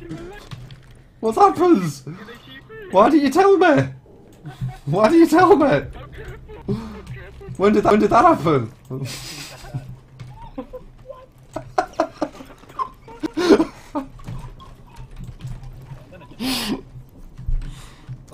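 At 7.90 s and again at 13.26 s, a CD skip: the laser jumped tracks, so playback mutes for a few milliseconds, ticks, and resumes elsewhere. A waveform shows a brief flat gap and an abrupt discontinuity; a spectrogram shows a thin vertical broadband line.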